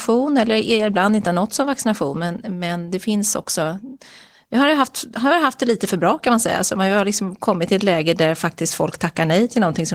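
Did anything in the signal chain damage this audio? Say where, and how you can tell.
Yes, at the codec stage: Opus voice compression throughout, the speech hoarse and faintly robotic from coarse excitation coding at what sounds like about 16 kb/s, with no dropouts, unlike network loss.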